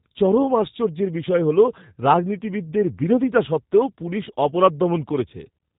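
From start to finish the speech carries plainly audible G.729 codec damage. The voice is rebuilt from a vocal tract filter, a pitch predictor and a few pulses per short frame, so it sounds rough and faintly synthetic, with nothing above 3.8 kHz. That texture fits an 8 kbit/s G.729A stream. A simple narrowband filter or G.711 would sound dull but clean; here the voice itself is coarsened, not just muffled.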